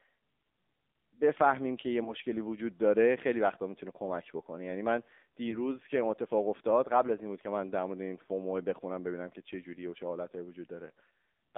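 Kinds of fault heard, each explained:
AMR narrowband mobile codec: low-rate mobile speech coding, consistent with about 7.4 kbps, sounds buzzy and synthetic. The spectrogram shows energy confined between 250 Hz and 3.6 kHz.
lost AMR speech frames: single frames dropped near 2.04 and 5.50 s are patched with a fading guess, heard as brief warbles. The waveform shows short amplitude dips.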